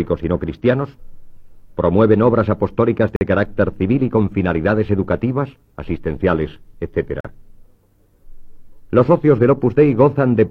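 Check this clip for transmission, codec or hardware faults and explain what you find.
Two short dropouts interrupt the sound, both gaps between stream segments. The first runs from 3.16 to 3.21 s (49 ms), the second from 7.20 to 7.25 s (about 42 ms), roughly 4 s apart, matching the segment length. Adjacent segments' timestamps don't meet, so the player pads the hole with silence. Nothing is lost; the sound just stops abruptly and resumes. A waveform shows flat silent stretches with sharp edges; a spectrogram shows thin, fully dark vertical bands.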